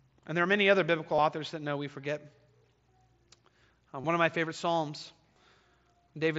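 This speech clip, carried over a wideband mSBC Bluetooth headset link, has concealed Bluetooth headset packet loss four times. The gaps fall at 1.16–1.18 s, between "are many other biblical" and "authors that know we"; at 2.58–2.61 s; at 4.01–4.04 s, just before "one of my favorite"; and at 5.34–5.36 s. Each lasts 22.5 or 30 ms, which fits three or four lost headset frames. The receiver fills each hole by repeating a matching stretch of recent waveform. The result is a brief buzzy, held tone with a slight warble as real audio resumes.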